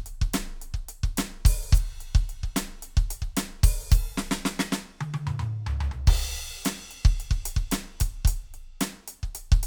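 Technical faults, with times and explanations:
No technical faults detected anywhere in this music.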